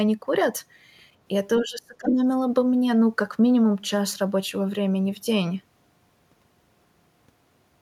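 Between 1.6 and 2.22 s the echo canceller likely hit a double-talk moment: with both ends talking at once, it could not tell the near talker from the loudspeaker echo it was meant to remove, so it pulled the gain down on everything. The result is speech suppressed in double talk. The speech sinks sharply, by roughly 25 dB at its deepest, and stays pushed down for about half a second in total before recovering.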